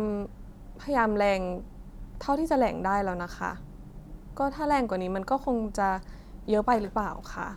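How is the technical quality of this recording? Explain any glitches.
No technical faults or glitches can be heard here.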